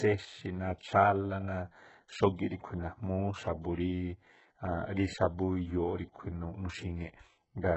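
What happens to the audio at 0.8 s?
At 0.8 s the speech sounds like it does across the whole clip: treble that is bright but gritty and lispy, with nothing above 8 kHz. This is likely heavy HE-AAC compression at a very low bitrate, around 8 kbps, rebuilding highs by copying lower bands upward. Those copied, misaligned harmonics set it apart from a plain low-pass cut, which would sound dull.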